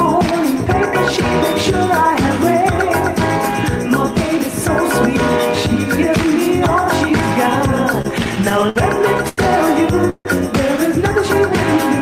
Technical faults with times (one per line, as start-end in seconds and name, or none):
7.93-8.78 repeated stalls (stutter)
9.29-9.40 short stall from a late packet
10.10-10.27 call audio freeze